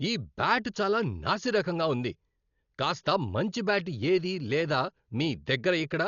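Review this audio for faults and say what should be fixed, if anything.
Throughout, the speech is dull with nothing above 6.9 kHz and rough, fluttering noise around tones, likely heavy Dolby Digital compression at a bitrate near 40 kbps. Prevent it by encoding at a higher bitrate.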